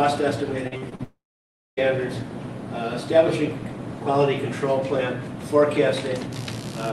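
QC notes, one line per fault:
0.67–1.01 s, repeated packet loss (robotic sound): four short holes, the longest about 41 ms, about 140 ms lost in total, each patched by stretching the preceding sound. About 41% of this stretch is filled-in sound, which makes it choppy. Unlike a dropout, the sound keeps returning between the holes.
1.03–1.79 s, long network dropout: one continuous gap of about 740 ms. The last sound continues briefly as a fading buzz or hiss, and then about 590 ms of silence follows before the audio resumes with that part gone. A single network outage is the likely cause, rather than scattered packet losses.
6.32–6.93 s, computer activity noise: a pulsing buzz repeating roughly 70 times per second, about 20 dB below the signal, running to the end of the clip. It follows the machine's load rather than the sound, and its rate and on-off behaviour set it apart from steady mains hum.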